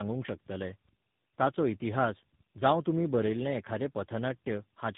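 Throughout the speech, tandem speech coding is at work. The call was decoded and re-encoded by three different speech coders in turn, each compressing the previous one's errors again. The result sounds rough, muffled and warbly, with nothing above 3.8 kHz.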